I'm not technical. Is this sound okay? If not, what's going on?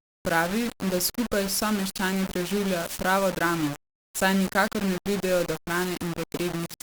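No. The recording was most likely stored with far too little detail, a problem called low bit depth without dither. Each moment of the voice was rounded to one of only a handful of levels, which points to roughly 4 bits, and nothing was added to smooth that rounding. So the voice sounds grainy and rough throughout, with a gritty edge that shifts as the speech changes, and the softest parts get especially harsh.

There are also two wireless microphone noise hits, from 2.80 to 3.03 seconds and from 5.68 to 5.91 seconds. A radio microphone sends its sound through the air to a receiver, and at these moments that radio signal briefly weakened, most likely because reflections cancelled it out. The receiver's own hiss rose up to fill the gap, so each hit sounds like a quick swish or burst of static lasting about a quarter of a second over the voice.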